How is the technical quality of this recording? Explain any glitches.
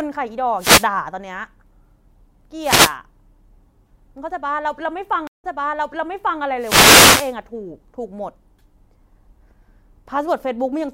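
The recording is compromised by two kinds of glitch: repeated radio-link noise bursts and one stream dropout that replays part of the speech.

Wireless microphone noise hits occur at 0.58–0.87 s, 2.60–2.95 s and 6.58–7.35 s. As the FM signal fades through cancelling reflections, receiver noise surges over the voice as a swish of static. A spectrogram shows broadband haze smearing across the speech harmonics, and the waveform shows a fuzzy noise floor.

A stream reconnect begins at 5.27 s. The player drops to silence for 166 ms and then restarts decoding mid-stream, resuming about 0.98 s earlier, so speech repeats. The waveform shows a flat gap, then a restart. In the spectrogram, phrases just heard appear again by 6.41 s.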